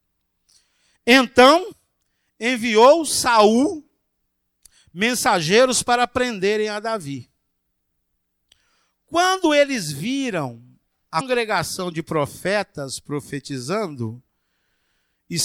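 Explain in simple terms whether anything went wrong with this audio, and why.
Damaged data in a compressed stream at 1.71 s and 11.17 to 11.21 s, just after "eles viram": corrupted bytes make the decoder lose its place, producing brief blips in the speech.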